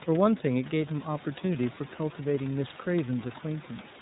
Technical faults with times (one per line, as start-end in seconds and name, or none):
0.00-4.02 iLBC codec